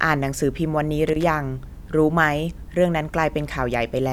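At 1.08 to 1.26 s, loose connector crackle breaks out. A worn contact makes and breaks, chopping the speech into a short, irregular scratching burst.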